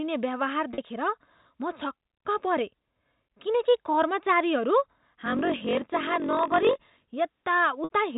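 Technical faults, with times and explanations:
0.74 s, 5.58 s and 7.84 s, packet loss with pitch repetition: brief held, buzzy tones lasting 40, 20 and 60 ms. Lost packets were bridged by repeating the last pitch period and fading it out. The 60 ms gap begins to fade before the sound resumes.
5.24 to 7.12 s, block size mismatch (padded): a steady 46.9 Hz buzz, with the sound running at 0.938 times normal speed but at about its usual pitch. Each block arrives short and is zero-padded to a read size that fits 1,024 samples.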